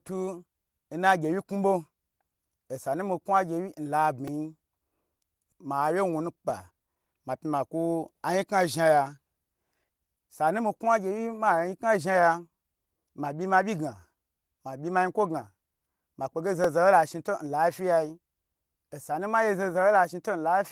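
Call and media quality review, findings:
Repeated buffer, 4.28 s and 16.64 s: playout underran and the device replayed its last 2.67 ms block, which fits a 128-sample buffer, three times, then twice. Heard as a brief click-buzz.

Skip ahead, 5.52 to 5.54 s: the jitter buffer likely overflowed and dropped about a second of queued audio. Playback jumps forward almost seamlessly.

Jitter buffer speed-up, 5.64 to 7.30 s: the buffer trimmed pitch-period slices, roughly 150 ms in total, to shed excess delay. Speech runs about 9% fast at unchanged pitch and sounds hurried.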